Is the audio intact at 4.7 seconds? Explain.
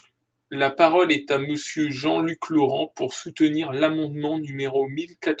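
Yes, the speech at 4.7 seconds is intact, with no dropout, glitch or other fault at that moment.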